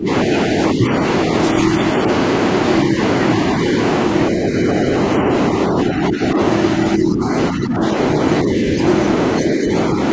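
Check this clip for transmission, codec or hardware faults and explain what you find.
Two faults are present: a steady USB whine and repeated dips in the speech that likely come from double-talk suppression.

USB whine runs through the whole clip as a fixed-pitch tone at 1 kHz, loudest at its 2 kHz harmonic and about 25 dB below the speech. The USB bus's 1 ms frame activity leaks into the audio through power or ground. Its pitch is far above the 50 or 60 Hz of mains hum, which sets it apart.

Speech suppressed in double talk shows up as level dips at 0.0–0.09 s, 0.74–0.86 s, 5.2–6.39 s, 6.96–7.82 s, 8.43–8.79 s and 9.43–9.98 s. The first dip is deep, roughly 20 dB, and the one near 7 s reaches about 10 dB. The rest are shallow. The likely cause is an echo canceller turning the talker down while the far side also spoke.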